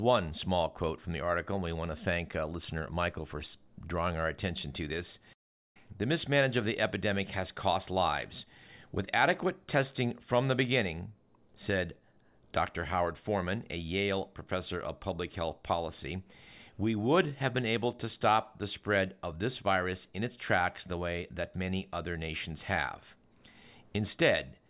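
A speech recording, and nothing in it points to a technical problem worth flagging.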